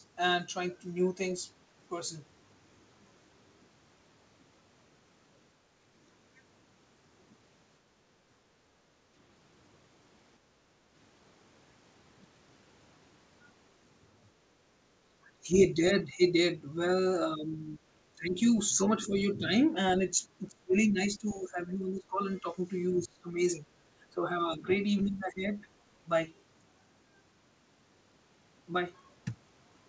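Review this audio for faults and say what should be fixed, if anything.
At 7.92 to 8.03 s and 15.07 to 15.15 s the room sound briefly dips, by about 7 dB and then about 11 dB, and recovers within a tenth of a second. This is background gated by the echo canceller, which clamped the microphone while the loudspeaker played. Gentler suppression with a comfort-noise floor would keep the background steady.

From 15.43 to 17.79 s, 18.15 to 19.75 s, 20.48 to 22.45 s, 22.91 to 23.65 s and 24.10 to 25.62 s the talker's voice sinks and thins in patches. The dips are mild early on and reach roughly 20 dB in the third and fourth stretches. This is likely speech suppressed in double talk: the canceller cannot separate the talker from the far-end echo while both speak, so it turns everything down. Better double-talk detection, or less aggressive nonlinear suppression, would prevent it.

Around 16.24 to 16.28 s a faint scrap of a second voice slips through, far below the talker, at roughly a twentieth of their level. 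This is likely the other side's voice leaking through: echo the canceller did not fully remove from the microphone. Longer echo-path modelling, or headphones at the talker's end, would stop it.

Nothing in the sound lies above 8 kHz, which fits a G.722 call path at 64 kbps.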